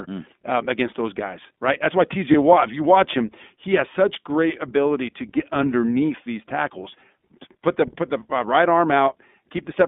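From start to finish the speech carries plainly audible iLBC codec damage. The band runs only from about 200 Hz to 3.6 kHz, so it sounds thin and telephone-like, and voiced sounds have a slightly rough, synthetic grain. Each short block of excitation is coded on its own, which fits iLBC's 20 ms, 15.2 kbps mode. That texture sets it apart from a plain low-pass filter, which would dull the top but leave the remaining sound smooth.

At about 2.32 to 2.35 s come lost iLBC frames: a gap of about 20 ms, which fits one dropped 20 ms frame. The decoder covers it by repeating the last pitch cycle mixed with a little noise, so the hole is heard as a brief held, faintly buzzy tone rather than silence or a click. The sound is normal again straight after, unlike codecs that depend on earlier frames and stay smeared for a while.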